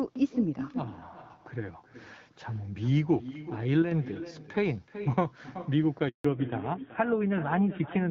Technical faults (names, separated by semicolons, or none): echo with no canceller; one channel drops out; handover gap; fallback to narrowband